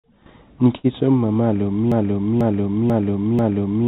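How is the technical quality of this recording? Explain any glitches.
Two glitches stand out in this speech clip, which has come through a narrowband call line where nothing gets above 4 kHz. The first is a short stall, and the second is a broken-record loop that runs to the end.

Around 0.77 to 0.87 s there's a short stall from a late packet. A packet showed up late, the jitter buffer ran dry, and the receiver stretched the last bit of sound for about 66 ms until it arrived. Nothing's actually lost, but that moment hangs a touch too long.

From 1.92 s to the end there's a broken-record loop. The same 0.49 s fragment plays back to back four times, and whatever should have followed is gone. That's likely the player or stream stalling and resending the last chunk it had buffered.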